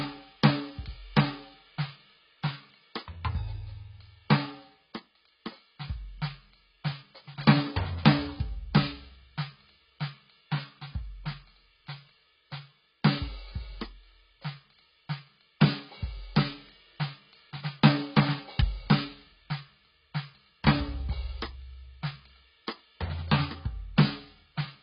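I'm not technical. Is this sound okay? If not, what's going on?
No. The music sounds dull and muffled throughout, with nothing above about 5.4 kHz. This is likely heavy AAC compression, which discarded the treble to save space.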